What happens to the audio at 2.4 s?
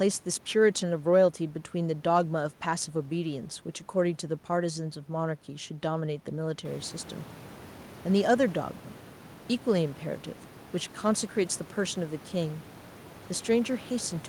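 Nothing goes wrong at 2.4 s; the speech there is intact, with no dropout, glitch or distortion.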